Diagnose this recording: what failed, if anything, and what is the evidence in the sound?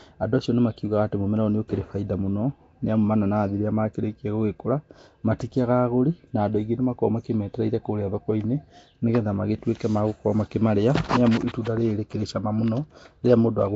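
The codec stage failed throughout. The speech has a rough, hissy halo and a smeared, underwater quality. Nothing sounds above 7.8 kHz. The cause is likely Nellymoser compression, which fits a 32 kbps stream. Too few bits per block leave weak bands filled with noise.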